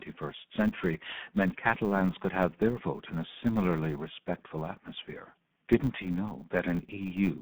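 From start to finish the speech runs through the Speex codec, and it sounds heavily starved, hoarse and rather robotic, which fits about 8 kbps, with a 150 Hz to 3.5 kHz telephone band and nothing above 3.5 kHz. Throughout there's also a 100 Hz buzz from a filter restarted on every block: each block starts from silence and clicks, pointing to 10 ms blocks.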